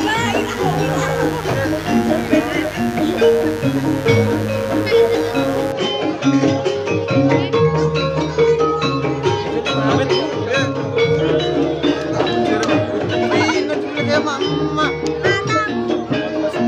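From the start to about 5.73 s there's a steady, raspy mains buzz sitting roughly 15 dB under the sound. Sharp switching spikes on a 50 Hz supply, most likely from a dimmer or poor shielding, are leaking in and spraying harmonics well up into the kilohertz range.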